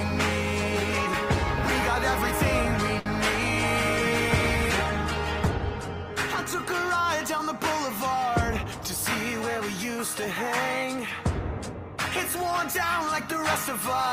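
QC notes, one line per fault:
2.99–3.08 s, short stall from a late packet: a packet arrived late, the jitter buffer ran dry, and the receiver stretched the preceding sound for about 63 ms until the data came in, then resumed from the same point. Nothing is lost, but one sound hangs on too long with a faint buzz, and everything after it sits 63 ms later. A spectrogram shows smeared, flattened harmonics across the gap, and the waveform shows a repetitive, slightly dipping stretch.
3.68–6.84 s, call bitrate drop: the bandwidth estimate fell and the encoder was pushed from 32 kbps down to 18 kbps, staying at the lowest rate for about 3.1 s. With fewer bits the coding becomes coarser, so the sound turns rough and watery, with some loss of brightness, before it recovers. On a spectrogram the upper band thins and looks blotchy, with patchy, quantised texture in place of fine detail. The waveform shows little obvious change.
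8.58–8.79 s, jitter buffer speed-up: the buffer was holding more audio than its target, so to shorten the delay the receiver cut out short pitch-period-sized pieces several times in quick succession, about 40 ms in total. Playback briefly runs at about 114% speed without any pitch change, so the passage sounds hurried. A spectrogram shows events packed closer in time at unchanged frequencies, and the waveform shows a compressed stretch with tiny splice points.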